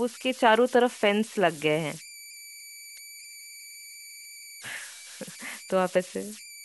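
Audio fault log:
throughout, converter idle tones: an undithered delta-sigma converter settles into repeating bit patterns at low input, leaving a whistle near 2 kHz, about 19 dB below the speech.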